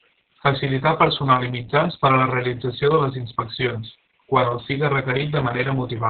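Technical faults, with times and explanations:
throughout: Opus voice compression. The speech sounds muffled, hoarse and slightly robotic, with nothing above about 4.2 kHz. The codec's SILK linear-prediction coder has narrowed the band and coded the excitation coarsely, which fits a very low bitrate around 6 kbps.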